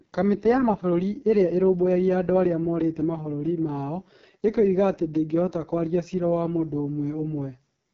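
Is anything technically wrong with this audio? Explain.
Yes. Throughout, the speech shows AMR wideband (HD Voice) codec damage: rough, raspy, buzzy detail, which fits its lowest 6.6 kbit/s mode, with nothing above 7.5 kHz.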